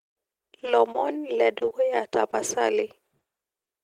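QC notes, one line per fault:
0.59–0.63 s: short stall from a late packet. One packet arrived about 20 ms late, so the jitter buffer ran empty. The receiver stretched the last sound for 20 ms, then resumed where it left off. Nothing is lost, but the sound briefly drags.
0.92–0.96 s, 3.19–3.23 s and 3.65–3.69 s: short concealed packet loss. Each time, 20 ms of audio never reached the decoder. The receiver filled the hole by continuing the preceding sound, then blended back into the real signal. Each is heard as a brief smear or wobble.
1.59–2.35 s: repeated packet loss (robotic sound). Four gaps, none longer than 20 ms, fall in this stretch. About 60 ms of audio is missing, and 80 ms was patched by extending the last sound. Around 11% of the span is concealed, which gives a choppy texture.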